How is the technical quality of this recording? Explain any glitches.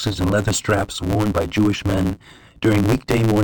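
The recording has one clear technical fault that runs through the whole speech clip. A block size mismatch (truncated) drops the end of every block, consistent with 512-sample blocks being cut short by the next stage. Each cut causes a 109 Hz buzz, and speech runs 1.16 times fast at roughly normal pitch. A spectrogram shows vertical seams every 9.2 ms, and the waveform jumps abruptly at each join.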